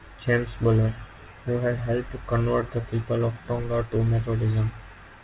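From 2.80 to 3.42 s the speech drags to 95% speed at unchanged pitch: a jitter buffer slow-down, repeating pitch periods to add 39 ms.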